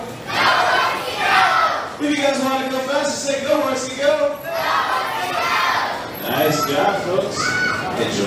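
Nothing goes wrong anywhere in this one; the sound just runs along without a single technical hiccup to point at.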